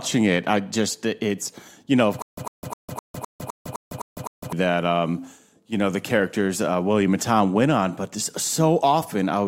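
Stutter with silent gaps from 2.22 to 4.53 s: right after "it's you know of", the speech catches on a short fragment of about 104 ms, which repeats nine times, each followed by about 153 ms of dead digital silence, giving an even cycle of roughly 256 ms. The likely cause is a stalled player or stream that replayed its last buffered piece at each retry before running dry, so the speech meant for that span is gone and playback resumes at "that um you know".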